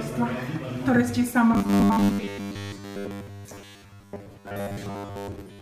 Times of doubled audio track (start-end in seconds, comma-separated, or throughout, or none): none